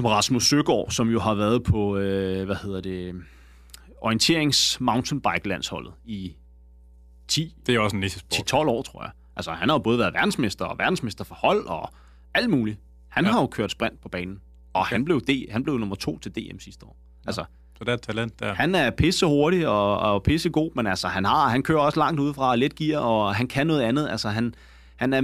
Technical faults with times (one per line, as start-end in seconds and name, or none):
0.00-25.23 mains hum